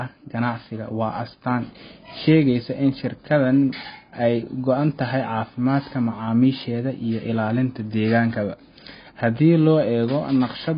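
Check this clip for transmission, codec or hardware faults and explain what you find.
AAC compression runs throughout the speech, likely from AAC-LC coding at a low rate, as heavy damage fits a bitrate near 16 kbps. The encoder discards everything above 5 kHz and starves remaining bands, so the audio sounds dull and smeared, with fizzy, warbling sibilants.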